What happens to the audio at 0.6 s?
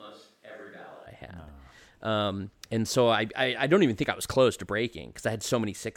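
At 0.6 s the speech is roomy and hollow, thin in the bass, roughly 10 dB quieter, with room noise only about 25 dB below it, from the start until 1.06 s. This is likely a switch to a distant microphone, with a far pickup replacing the close one. Unlike added reverb or filtering, the tone, level and noise floor all snap back together at 1.06 s.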